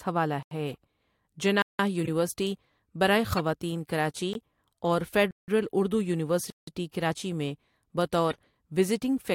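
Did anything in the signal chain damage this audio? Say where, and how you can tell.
Yes. The audio was damaged at two points, in the output buffering stage and in the codec.

Blocks of digital silence appear at 0.43–0.51 s, 1.62–1.79 s, 4.33 s, 5.31–5.48 s (right after "کراچی اور"), and 6.50–6.67 s (just before "کراچی میں"). The first gap lasts about 85 ms, which fits a 4096-sample buffer. The three longer gaps each last about 171 ms, which fits 8192 samples. The gap at 4.33 s is only about 18 ms. Each gap is a dropout that cuts out and back with no fade, the sign of a buffer that was not filled in time. On the waveform each one is a flat line. On a spectrogram it is an empty vertical column.

Corrupt frames were decoded at 0.70–0.76 s, 2.05–2.08 s, 3.32–3.40 s (just before "کراچی اور"), and 8.30–8.36 s. Each event spans roughly three or four codec frames. Damaged bits made the decoder put energy at the wrong frequencies, producing short bursts of misplaced sound. 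The errors peak at about −20 dBFS at 2.05 s and 3.32 s, around −30 dBFS at 8.30 s, and lower at 0.70 s. On a spectrogram they show as bright, frame-length blocks that ignore the speech harmonics.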